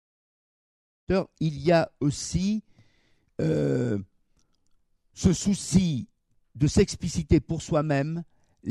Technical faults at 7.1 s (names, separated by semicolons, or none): none